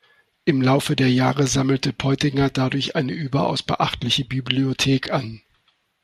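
Speech, with no technical fault audible anywhere in the clip. Nothing in it calls for a repair or a fix.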